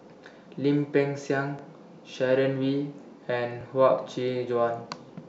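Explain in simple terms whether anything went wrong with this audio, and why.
The speech was handled in pieces about 2 seconds long, and each new piece began slightly before the previous one had finished. This is a fault called overlapping chunks. At every join, a tiny 20-millisecond slice of sound gets played twice. That doubled slice is too short to hear as an echo. Instead it comes across as a brief click or stutter, here at 1.59 s and again at 3.61 s, two seconds apart.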